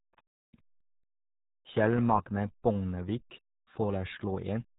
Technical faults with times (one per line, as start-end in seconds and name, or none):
0.00-4.79 RealAudio 14.4 codec